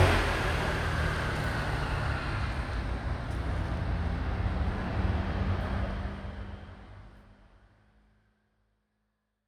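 No technical faults can be heard in this sound, and the smooth fade-out that begins around five and a half seconds in tapers evenly to silence at the end without any click or hard edge.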